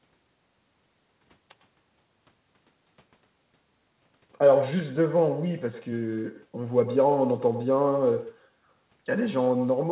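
From start to finish the speech carries an echo with no canceller. The far end is evidently playing the call on a loudspeaker, its microphone picks that playback up, and nothing strips it out, so every phrase comes back about a tenth of a second later, roughly 10 dB down. You hear it as a thinner shadow trailing each syllable, sitting on top of the narrowband, 4 kHz-limited sound you'd expect from a G.711 call path.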